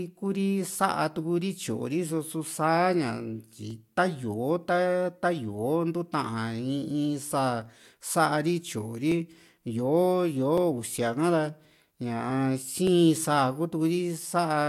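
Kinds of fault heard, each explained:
Dropped samples: three sharp clicks at 9.12, 10.58 and 12.87 s, likely from under a millisecond of stream going missing, so the waveform jumps.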